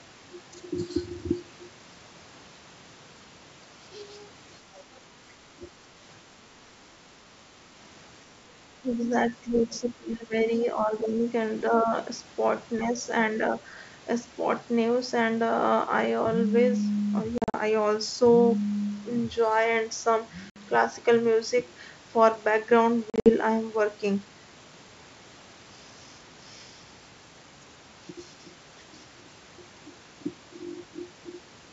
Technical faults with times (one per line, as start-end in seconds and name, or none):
5.53-5.64 speech suppressed in double talk
8.82-11.26 speech suppressed in double talk
11.69-11.94 speech suppressed in double talk
12.79-12.99 speech suppressed in double talk
17.38-17.57 packet loss on an ADPCM call
20.50-20.57 packet loss on an ADPCM call
23.10-23.33 packet loss on an ADPCM call